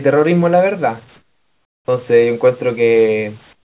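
A speech clip where the background twice collapses into a flat, featureless hiss, about 15 dB quieter from 1.16 to 1.88 s and about 18 dB quieter from 3.53 s to the end. The likely cause is comfort noise in place of the background: sending paused during silence and the receiver substituted synthetic noise.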